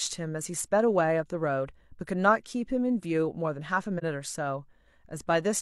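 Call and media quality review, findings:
AAC frame loss with muting, 3.98 to 4.03 s: brief soft-edged dropout in the speech. Decoder zeroed the missing spectrum; overlapping windows fade out and back in. Gap of about 43 ms fits a single lost frame.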